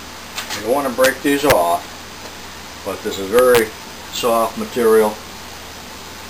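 Integer overflow cracks occur at 1.04 s, at 1.50 s, and across 3.39 to 3.59 s: peaks driven about 2 to 3 dB past the integer limit wrap to the opposite sign instead of clipping, producing harsh, violent cracks far sharper than ordinary clipping.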